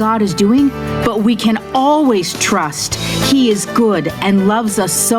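Gain pumping runs throughout: the gain swings around 15 dB under each loud sound, likely a hot gain into a fast limiter.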